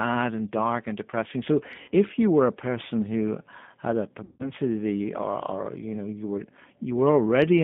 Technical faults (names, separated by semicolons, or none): G.729 codec; VoIP packet loss concealed by the speech codec